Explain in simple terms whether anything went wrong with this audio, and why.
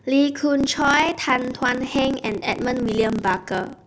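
From 0.58 s to the end, the speech has a block size mismatch (truncated). One stage hands over longer chunks of sound, which fits 512-sample blocks, than the next stage takes. Each chunk's end gets cut off. That makes a 33.3 Hz buzz, and the speech runs 1.07 times too fast at nearly normal pitch.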